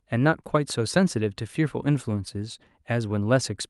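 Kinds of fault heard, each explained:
No kinds of fault are heard in this speech clip.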